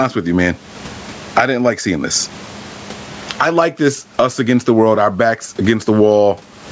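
A speech clip with gain pumping all the way through. The swing is big, something like 30 dB, and loud and soft passages end up squashed to a similar level. The likely cause is input gain set far too high for the mic, with a fast limiter or compressor clamping down on each peak. The room noise itself sits about 43 dB under the speech, and the top end stops around 8 kHz from the call's mic processing.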